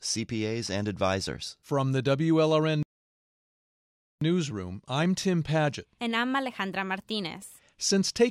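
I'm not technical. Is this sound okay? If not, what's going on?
No. At 2.83 seconds the speech suddenly cuts out and there is silence for about 1.4 seconds, until it comes back at 4.21 seconds. This is a playback stall. The sound doesn't fade or crackle. It simply stops partway through and later carries on. The likely cause is that the player briefly ran short of audio data, or got held up by something else on the device, and had nothing to send to the speakers until it caught up.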